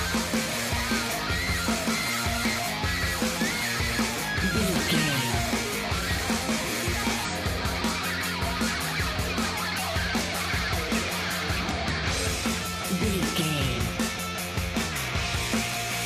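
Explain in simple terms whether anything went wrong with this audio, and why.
Damaged data in a compressed stream, from 7.25 to 7.31 s: part of the file was corrupted, so the decoder misread it and produced a brief glitch.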